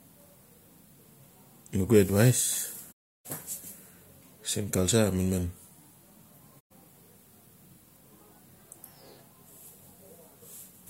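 Speech with two digital broadcast dropouts: the receiver lost good frames and muted, with about 20 ms fades, from 2.91 to 3.27 s and 6.59 to 6.72 s.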